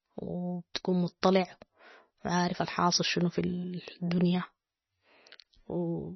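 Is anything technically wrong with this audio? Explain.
Yes. The speech carries heavy coding damage from start to finish, and nothing is heard above 6 kHz. The likely cause is MP3 compression at a very low bitrate, which fits roughly 24 kbps. With so few bits, the encoder removes everything above a fixed cutoff. It also drops weak frequency lines, and these switch on and off from frame to frame. The result sounds dull and watery, with swirling texture, metallic s sounds and smeared consonant attacks.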